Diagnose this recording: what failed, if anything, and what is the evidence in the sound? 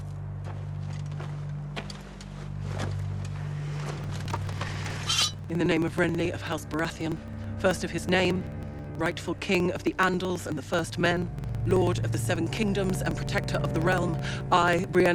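Driver stage: periodic USB or driver dropouts, 3.99 to 15.06 s, skipping about 10 ms every 54 ms; ticks vanish in silence, unlike electrical interference.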